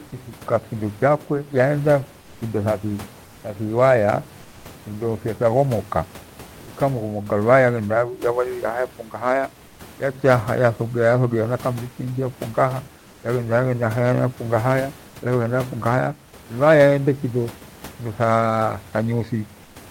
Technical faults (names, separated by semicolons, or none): comfort noise in place of the background